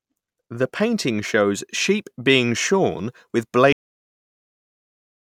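Speech that stops dead at 3.72 s, partway through a sound, falling straight to digital silence with no decay for the rest of the clip. This is a cut-off end: the final buffers of audio were never written or played out, so the recording simply ends mid-sound.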